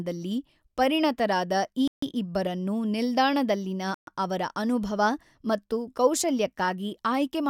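Bluetooth stalls at 1.88 s and 3.94 s cut the speech to silence for about 148 ms and 128 ms, the first just after "ಪರಿಣತರಾದ ಈ" and the second after "ಪರಿಣತರಾದ ಈ ಇಬ್ಬರನ್ನು ನಿಲ್ದಾಣದಲ್ಲಿನ". Each time the audio resumes where it stopped, at "ಇಬ್ಬರನ್ನು" and then "ಅವರ". The likely cause is radio interference delaying packets until the headphone buffer emptied, so playback paused until the retransmitted data arrived.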